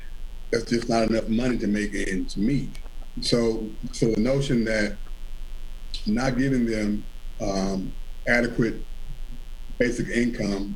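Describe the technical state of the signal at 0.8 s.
Switching spikes from 60 Hz mains leak into the signal path throughout, including at 0.8 s, adding a steady raspy mains buzz about 30 dB below the sound.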